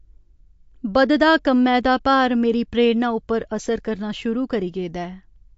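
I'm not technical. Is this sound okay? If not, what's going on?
No. From start to end this speech has the sound of heavy MP3 compression, likely from saving at too low a quality. Nothing above about 7.6 kHz survives, and s sounds turn watery and swirly, unlike plain muffling, which stays smooth.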